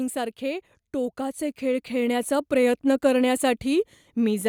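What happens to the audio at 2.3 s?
At 2.3 s the sound is partway through an automatic gain rising episode that runs from 0.39 to 2.79 s. The gain control judged the input too quiet and kept lifting its gain, by about 7 dB in total, so speech and the background noise beneath it swell together. Because the rise spreads over more than two seconds and lifts the noise floor with the voice, it differs from a talker simply speaking louder.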